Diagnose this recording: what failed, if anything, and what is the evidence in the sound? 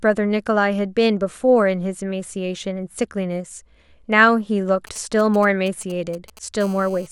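GSM signalling bursts, 4.87 to 6.61 s: galloping groups of ticks and short 217 Hz buzzes, roughly 20 dB below the speech, as the analogue wiring rectifies a nearby 2G phone's intermittent signalling.

GSM phone buzz, 6.61 to 7.07 s: a steady, raspy 217 Hz buzz rich in harmonics, about 26 dB below the speech, as the analogue circuit rectifies continuous call-mode transmission bursts.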